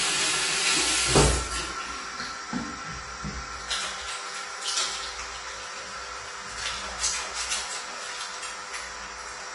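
From start to end, nothing is heard above 11 kHz, so the top is dull. The texture smears and fizzes, with plain warbling on sustained sound. This is likely AAC compression, starved of bits and dropping detail, which fits a rate near 32 kbps.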